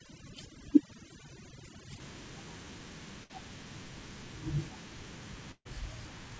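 Overdone noise removal, 0.0 to 2.0 s: suppression set too hard mutes frequency bands near the noise estimate, leaving twinkling specks in near-silence.

Burst of packet loss at 3.24 to 3.31 s and 5.51 to 5.67 s: the receiver stretches the last sound into a fading buzz or hiss, about 60 ms and 140 ms of speech vanish, and the second gap fades to brief silence.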